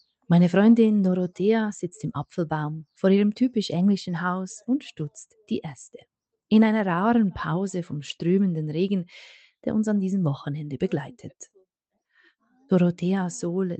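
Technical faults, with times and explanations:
Nothing stood out on listening; the audio came through the call path without any audible problem.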